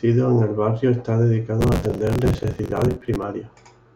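After "en el barrio está", 1.61–3.23 s brings processor overload crackle: dozens of short buffers, around 10 ms each, miss deadlines and replay stale audio, a sustained gritty tearing rather than one isolated dropout.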